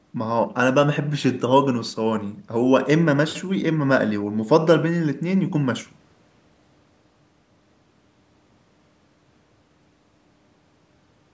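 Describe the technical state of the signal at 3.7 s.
At 3.7 s the speech is intact, with no fault present, only the normal band limit of call microphone processing, which leaves nothing above 8 kHz and trims the lowest bass.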